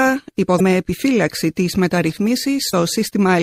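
MP3 compression runs through the whole clip: the sound is plainly watery and swirly, with dull treble, which fits a low bitrate of around 64 kbps. The likely cause is an encoder starved of bits, dropping weak frequency lines that flicker frame to frame and cutting high frequencies.

Damaged data in a compressed stream appears at 0.57 to 0.60 s and again at 2.70 to 2.74 s, each break about 38 ms long. Corrupted bytes make the decoder misread frames and hunt for the next valid header, leaving a brief glitch.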